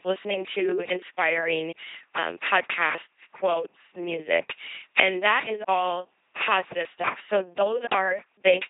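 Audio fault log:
Throughout, LPC-10 vocoder: the speech is a buzzing, mechanical robot voice, consistent with a 2.4 kbit/s LPC-10 coder. Each instant is resynthesised from a pulse train or noise through a ten-pole filter, so wrong voicing choices become buzz or hiss. Nothing is present above 3.8 kHz.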